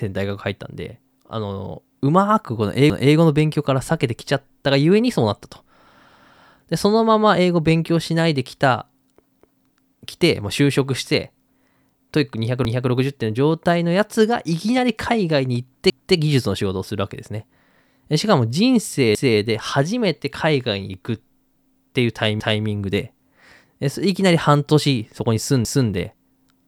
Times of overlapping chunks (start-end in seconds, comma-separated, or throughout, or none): 2.90-3.15, 6.15-6.40, 9.40-9.65, 12.65-12.90, 15.90-16.15, 19.15-19.40, 22.40-22.65, 25.65-25.90